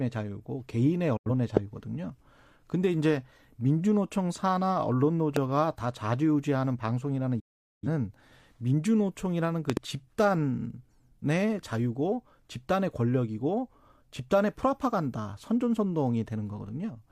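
At 1.17 to 1.31 s the speech cuts out abruptly, fading to silence over about 8 ms. The hole lasts around 85 ms before the sound returns further along. This is a digital broadcast dropout. The receiver muted when incoming frames went bad, and a gap this short fits two lost frames. Whatever was transmitted during that stretch is simply gone rather than delayed.

At 1.57 to 1.59 s a single sharp pop jumps out, far louder than the speech, while the talking carries on beneath it. The same loud pop recurs at 5.36 to 5.39 s. Each sounds like a brief voltage spike added to the signal, most likely from a switch, connector or static discharge, which the following circuitry shapes into a short crack.

From 7.40 to 7.87 s a second digital broadcast dropout mutes the speech, again with a fast fade of about 8 ms. This time the silence stretches to roughly 430 ms, which points to about ten consecutive frames failing. 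The programme resumes later, with that portion missing.

At 9.70 to 9.79 s there is a double pop, two sharp clicks in quick succession, each far above the speech level. It is likely the same kind of spike as the earlier ones, and the sound continues underneath uninterrupted.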